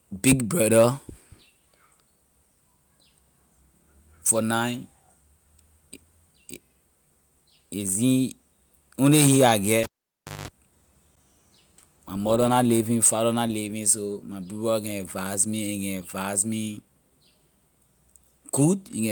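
At 9.83 s, just after "only he I", the speech is interrupted by a cable pulled and plugged in, lasting until 10.48 s. A pop marks the plug leaving the socket, and the signal drops to near silence for about 0.6 s. While only the tip makes contact on reinsertion, the unshielded connection picks up roughly 0.19 s of 50 Hz mains buzz, then a second pop as the full connection restores the sound.

At 11.16 s there is a block of digital silence about 12 ms long, which fits a 512-sample buffer left unfilled. The output did not receive its samples in time, so zeros were sent instead. The waveform jumps to zero and back with no fade, and both hard edges produce a discontinuity. At this length it comes across as a short tick or brief hole in the speech rather than an audible gap.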